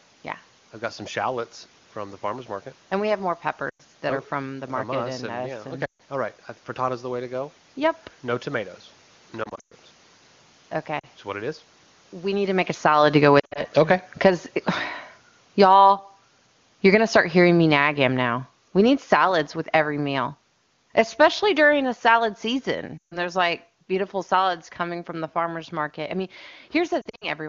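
Lost AMR speech frames show up first at 3.70 to 3.82 s, right after "we have more": about 100 ms where radio errors corrupted frames and the wideband decoder stretched the last good sound before fading it quickly. The same quickly fading dropout recurs at 5.85 to 6.01 s (140 ms, just before "all right"), 9.43 to 9.74 s (scattered, longest run 120 ms), 10.99 to 11.07 s (a brief 40 ms dropout), 13.39 to 13.65 s (choppy, short runs), 22.98 to 23.18 s and 27.01 to 27.28 s.

Automatic gain falling starts at 12.7 s, after "need to make a", just after the talker shifts position. The AGC decided the input was too loud or its noise too strong and eased its gain down about 17 dB by 25.07 s, before "the farmer's market I", so voice and room noise sink together.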